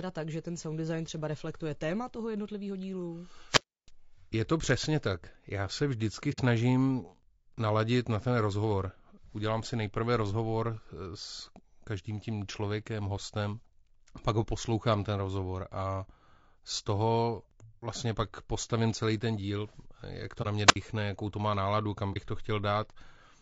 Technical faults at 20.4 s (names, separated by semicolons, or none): low-delay AAC compression; AAC frame loss with muting